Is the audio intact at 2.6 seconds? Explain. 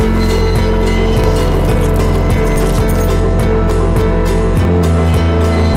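No, not quite. At 2.56 s the sound jumps ahead, with roughly 150 ms simply missing and the two sides butted together without any gap. That's likely a dropped buffer (overrun), where the samples weren't collected before the hardware overwrote them.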